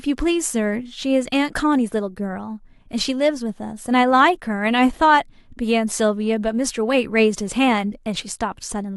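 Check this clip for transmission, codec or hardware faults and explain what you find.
One fault runs through the whole clip: the resampler restarted on every block. Each 10 ms block was converted separately, which fits a change from 44.1 kHz to 48 kHz. At every block edge the converter lacked the true neighbouring samples. The result is a 100 Hz buzz under the speech, present only while there is signal.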